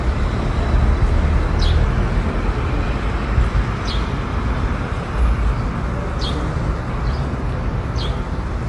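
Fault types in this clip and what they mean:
MP3 compression: The damage is plainly audible throughout. Nothing is present above 11.3 kHz, so the treble is cut flat. Weak frequency detail flickers in and out, giving a watery, swirly texture. The likely cause is MP3 encoding at a low bitrate, around 45 kbps.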